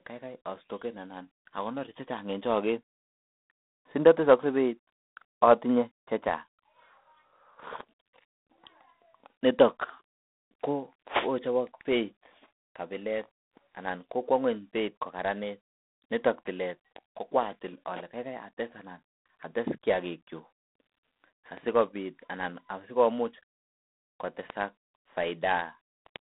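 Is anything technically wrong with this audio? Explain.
Yes. Throughout, the speech shows G.726 ADPCM damage. Coarse difference coding, consistent with 24 kbit/s, adds a harsh, level-following hiss. Nothing passes above 3.9 kHz.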